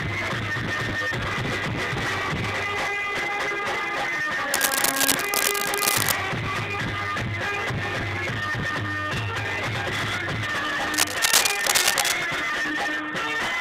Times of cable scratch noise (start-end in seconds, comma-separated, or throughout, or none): 4.54-6.12, 10.93-12.14